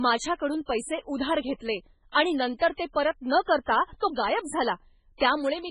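A speech recording with a watery, swirling character throughout. Fine detail flickers in and out, s sounds turn metallic and chirpy, and nothing is heard above 10.5 kHz. The likely cause is heavy MP3 compression at a very low bitrate, around 16 kbps: weak frequency lines are dropped and return from frame to frame, and the treble is cut at a fixed point. Twice, a short hiss arrives just before a sharp onset, which then sounds softened. The first comes after "उधार घेतले आणि नंतर" at 2.75 to 2.79 s, spreading about 36 ms ahead of "ते परत न". The second comes after "नंतर ते परत न" at 3.64 to 3.68 s, spreading about 44 ms ahead of "तो गायब". This is pre-echo: the codec spreads the noise meant for a loud attack across the whole block, so it leaks into the quiet moment before the attack.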